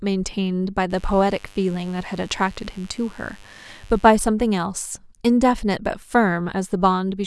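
A steady, raspy buzz sits under the speech from 0.90 s to 4.17 s, roughly 30 dB below it. This is mains buzz: switching spikes from 50 Hz power leak in twice per cycle, spraying harmonics up into the kilohertz range.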